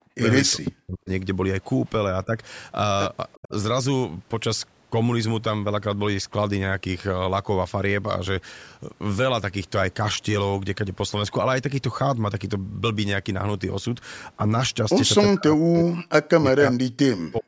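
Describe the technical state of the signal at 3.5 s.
Speech suppressed in double talk runs from 3.34 to 3.52 s. The voice plunges by around 35 dB for about a fifth of a second. This is likely because the echo canceller, facing both sides talking at once, could not tell local speech from loudspeaker echo and attenuated everything.

Echo leak sits inside that dip, from 3.42 to 3.48 s. A faint scrap of voice arrives 376 ms late, about 25 dB below the speech. It is likely what the far side's canceller failed to remove from its microphone and sent back.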